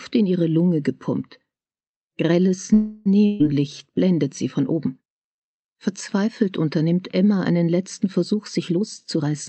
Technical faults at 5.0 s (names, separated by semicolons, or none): none